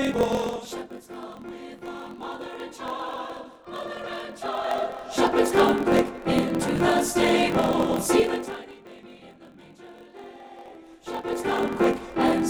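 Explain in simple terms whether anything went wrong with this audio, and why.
Yes, two things went wrong. First, a block size mismatch (truncated): one stage passes along longer chunks of audio than the next stage takes in, so the tail of every chunk is dropped. Throughout the clip that makes a steady 43 Hz buzz, and everything plays about 1.12 times too fast while keeping roughly its normal pitch. This fits chunks being read 1024 samples at a time.

Second, zipper noise from 8.13 to 8.79 s: the volume was pulled down a long way in small jumps, about forty a second, instead of one smooth slide. Each jump leaves a tiny click, so you hear a quick ticking, zipping texture while the sound fades.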